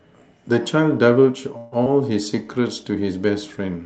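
From 1.57 to 1.74 s there is a call audio freeze: the last sound is stretched into a fading buzz for about 145 ms, and the audio then resumes where it stopped, so nothing is lost but everything after it lands later. The likely cause is packets held up in transit until the jitter buffer ran dry. A spectrogram shows a smeared, decaying band with no new detail, and the waveform shows a tapering envelope.

At 1.84 to 1.88 s comes short concealed packet loss. About 60 ms of audio never arrived in time, only around 17 ms was filled by extending the previous sound, and the stream skips ahead by a few hundredths of a second. It is heard as a quick smear or wobble. The waveform shows a brief splice, and the spectrogram shows a short blurred patch with a discontinuity.

Between 2.30 and 2.55 s a jitter buffer slow-down stretches the speech to about 85% speed, adding roughly 45 ms by repeating single pitch periods. 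The pitch stays the same while the sounds drag. In the waveform, near-identical cycles repeat one after another. On the spectrogram, harmonics run flat and elongated. Throughout the clip, energy stops at about 8 kHz, which fits a wideband call codec setting.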